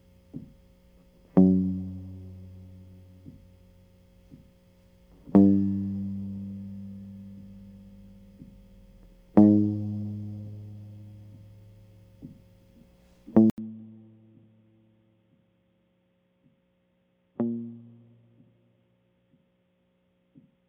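At 13.5 s the music drops out for 80 ms, then returns noticeably quieter, dull and boxy, with nothing above 3.8 kHz and a faint new noise floor beneath it to the end. The input likely switched to a poorer device.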